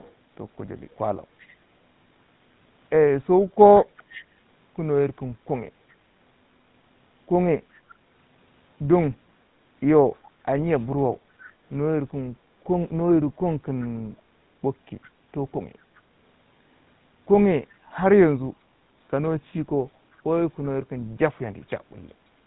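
Throughout, the speech passed through the GSM full-rate codec, consistent with 13 kbps, cutting everything above 3.9 kHz and leaving a plainly audible buzzy, gravelly roughness.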